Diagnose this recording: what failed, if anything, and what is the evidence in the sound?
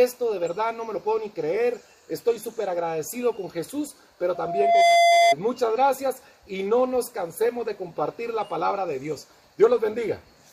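Loudspeaker feedback squeal in the acoustic monitoring path: a 686 Hz tone swells over about half a second from 4.35 s, runs roughly 10 dB above the sound, stopping at 5.35 s.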